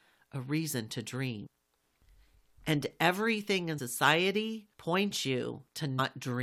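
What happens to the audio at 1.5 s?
An abrupt jump ahead at 1.45 to 1.47 s, just after "a reason to", as about a fifth of a second vanishes: compressed frames skipped, roughly seven frames of about 23 ms.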